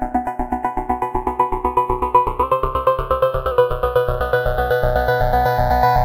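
A clip of sounds with a drift correction step from 2.43 to 3.51 s: speed rises 5.9% and pitch about a semitone together, then snaps back, likely from clock-matching software changing the playback rate to refill or drain its buffer, not gradual wow.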